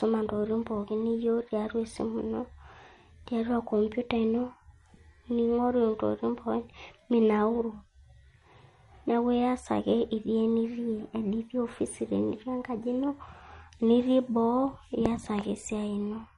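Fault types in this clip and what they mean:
Low-bitrate audio saved at a high bitrate: The speech has nothing at all above 11.2 kHz, and that hard ceiling, along with the thin, swirly MP3 coding texture, stays put however generous the file's bitrate looks. That pattern likely comes from an MP3 made at a low rate, something around 45 kbit/s, later re-encoded as a 320 kbit/s MP3. The bigger file just carries the earlier damage forward; it can't bring back what the first encode removed.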